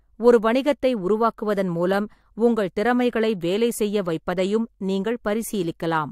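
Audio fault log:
No fault is heard in this speech clip.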